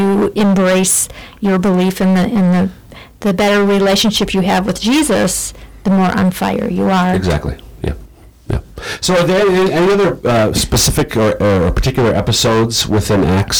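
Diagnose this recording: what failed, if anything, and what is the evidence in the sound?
Hard clipping runs through the whole speech recording. The level was driven about 21 dB past what the converter or sample-format stage could hold, so nearly a third of the waveform is sliced flat. That gives a constant harsh fuzz on every syllable rather than occasional crackle. The clean flat tops and bright high harmonics set it apart from the rounder sound of soft saturation.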